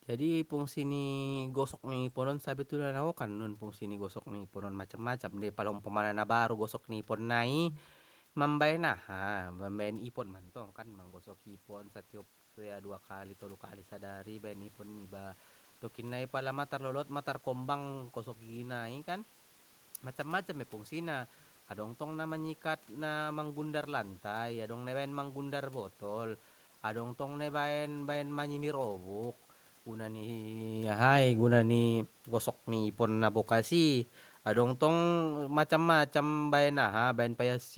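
Automatic gain rising occurs at 9.37 to 12.0 s and again at 12.56 to 14.7 s. Around 10 s the talker moves away and the level at the microphone drops by about 12 dB. The gain control then lifts its gain in two slow steps, about 3 dB and then about 4 dB, and the voice and the room noise swell together.

Automatic gain falling runs from 33.53 to 37.43 s, a few seconds after the talker shifts position again around 30.5 s. The gain control reads the input as too loud, or its background noise as too strong, and pulls its gain down by about 5 dB over nearly four seconds, so the speech and the room noise behind it sink together.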